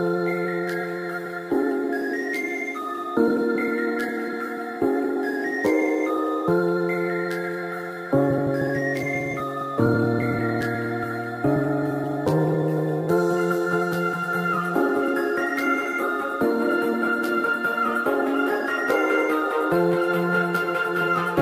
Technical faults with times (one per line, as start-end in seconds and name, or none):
none